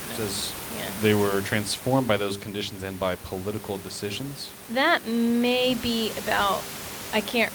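Nothing in this speech recording stood out as a fault on listening, and the room noise sits about 12 dB below the speech.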